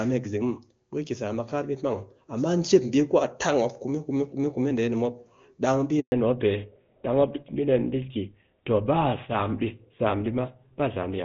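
At 6.0 s the speech cuts out abruptly and stays silent for about 120 ms until 6.12 s. This is a handover gap: as the call switched networks, no speech frames arrived for that stretch, so whatever was said during it is simply gone.

From 6.12 s to the end the speech sounds duller and rougher, with nothing above 4 kHz. This is a fallback to narrowband: the call left the clean HD Voice link, which sounds like AMR-WB near its top rate, for an older codec that points to GSM full rate.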